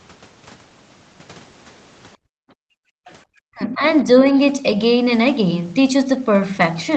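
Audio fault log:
2.17–3.06 s, background gated by the echo canceller: while the far end's audio played from the loudspeaker, the canceller clamped the microphone down by about 40 dB, so the room tone sinks almost to silence for close to a second and then returns once it releases.
3.06–3.13 s, other side's voice leaking through: the canceller likely failed to strip all of the loudspeaker signal from the microphone, so a brief scrap of a second voice surfaces, faint, sitting roughly 30 dB below the main speech.
3.35–3.85 s, speech suppressed in double talk: with both sides likely talking at once, the canceller could not tell the local talker from loudspeaker echo and turned everything down, so the speech drops by around 40 dB and fades out for half a second.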